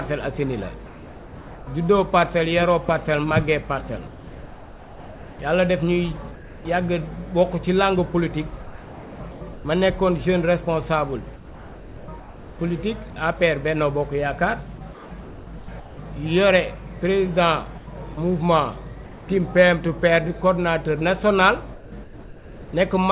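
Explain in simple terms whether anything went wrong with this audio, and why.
Several things went wrong, all typical of audio that has passed through a call link whose sound stops above 4 kHz.

Sound dropped by the voice detector, at 0.86 to 1.67 s and again at 6.35 to 6.65 s. The sending end likely judged quiet sound to be background and stopped transmitting. About 0.32 s and 0.13 s of real sound are missing, and steady hiss fills the gaps.

A loud pop, at 2.89 to 2.91 s. One sharp click sits well above the surrounding level while the sound continues underneath. This is likely a brief electrical spike, such as from a plug, a switch or a driver glitch.

Comfort noise in place of the background, from 4.07 to 6.65 s. For about 1.6 s the real room sound is replaced by smooth, featureless hiss. The sender likely paused transmission during what it judged to be silence, so the receiver generated filler noise.

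Sound chopped by the voice detector, at 8.63 to 9.65 s, 11.36 to 13.16 s, 14.78 to 15.98 s, 17.78 to 19.28 s and 21.74 to 22.73 s. Transmission likely switched on and off repeatedly, so edges and quiet parts drop out.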